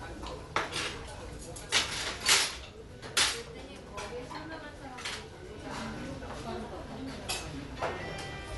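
Throughout, nothing is heard above 11.5 kHz. The everyday sounds are dull, with rough, fluttering noise around tonal parts. This is likely Dolby Digital compression, at a bitrate near 64 kbps. The band was cut, and starved frequency lines were filled with noise.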